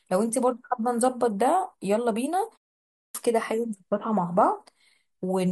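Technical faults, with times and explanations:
2.89–3.15 s, clipped start after a pause: after a silence of about 0.4 s, the output path had dropped into a low-power or unlocked state and took roughly 256 ms to resume, so the sound re-enters abruptly with its opening portion missing.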